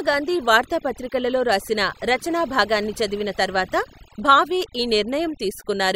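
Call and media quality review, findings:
Overdone noise removal, whole clip. Background drops, twinkling specks. Noise suppressor set too strong; cuts bands near its noise estimate, quiet speech parts lost too.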